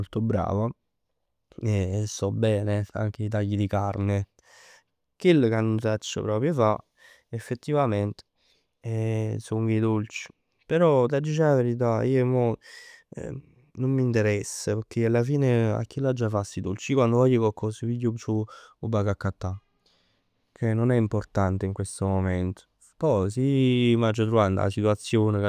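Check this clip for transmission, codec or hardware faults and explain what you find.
Nothing faulty turns up anywhere in this speech recording.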